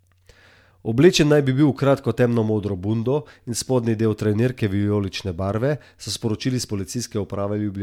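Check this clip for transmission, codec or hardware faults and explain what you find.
Nothing stood out on listening to this speech recording.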